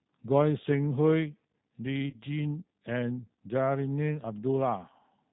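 From the start, the G.729 codec band-limits the speech below 4 kHz, giving it a rough, synthetic edge consistent with 8 kbit/s; a spectrogram shows an empty band above 4 kHz. At 2.10 to 2.16 s, VoIP packet loss concealed by the speech codec stretches the last sound and fades it over about 30 ms, which fits a single lost packet, with a decaying waveform envelope.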